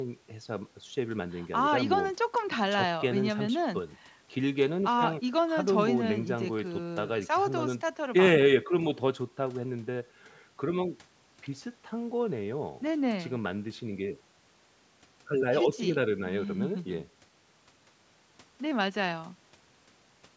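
No faults heard: the speech carries only the normal call microphone processing, with the lowest bass trimmed by its high-pass filter and nothing present above 8 kHz.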